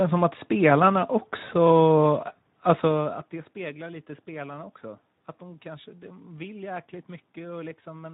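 Throughout the clip, the speech passes through the Speex codec at a low setting whose sound fits a bitrate around 11 kbps. Too few bits are left for the excitation signal, so the speech comes out plainly noisy and hoarse, while the level shift near 3 s is just the talker moving.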